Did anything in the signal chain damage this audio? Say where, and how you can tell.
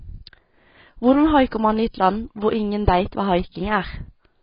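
Yes. The codec stage left the whole clip dull and smeared, with nothing above 5.2 kHz and a heavy warbling, fizzy texture. The likely cause is AAC compression, AAC-LC at a bitrate near 16 kbps. Unlike a plain low-pass filter, it leaves fizzy, warbling residue below the cut-off.

Pre-echo sits at 1.51 s, a short hiss spreading about 10 ms ahead of the attack just before "man i". The transform block spread its quantisation noise back into the quiet moment before the onset. Unlike a click or dropout, it only precedes an attack.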